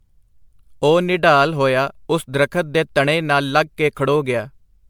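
Right through, the speech has a swirly, hollow, smeared quality with blurred attacks. It's likely generation loss, roughly ten re-encodes of MP3 near 128 kbit/s.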